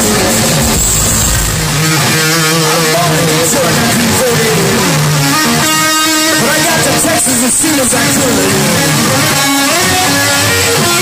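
At 6.28 to 6.34 s and again at 9.26 to 9.35 s, a corrupt frame decoded: damaged bits across a few frames throw energy to wrong frequencies, giving brief, loud squeaky blips.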